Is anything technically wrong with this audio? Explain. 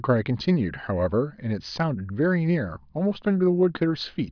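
No, nothing technical stands out here; the speech comes across without any fault worth flagging.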